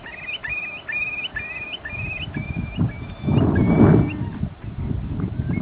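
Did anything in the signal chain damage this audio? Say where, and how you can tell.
Yes, at the call-processing stage. From 0.04 to 0.06 s, about 20 ms of the sound gives way to steady low-level noise, losing about 10 ms of real signal. This is likely sound dropped by the voice detector, with comfort noise filling the gap on the 4 kHz-limited G.711 call path.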